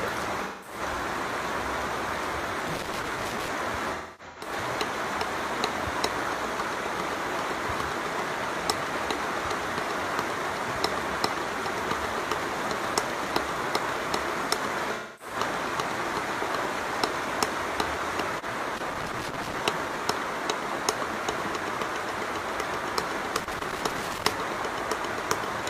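AAC frames went missing three times and the decoder concealed the gaps by reusing the last good spectrum. This leaves smeared, noisy, phasey patches at 0.44–0.80 s (about 0.21 s, fitting roughly five frames), 3.93–4.51 s (losses scattered over about 0.43 s, the longest run roughly 0.3 s) and 14.94–15.35 s (about 0.26 s). Separately, a loose connector contact made and broke intermittently, chopping the audio into irregular bursts of crackle and scratching at 2.68–3.48 s, 18.77–19.59 s and 23.40–24.33 s.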